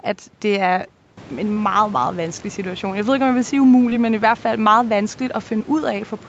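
Short concealed packet loss occurs at 1.53 to 1.58 s, 3.90 to 3.93 s and 5.59 to 5.62 s. Each time, about 20 ms of audio went missing and the receiver continued the preceding sound, so you hear a brief smear or wobble rather than the silent gap of a dropout.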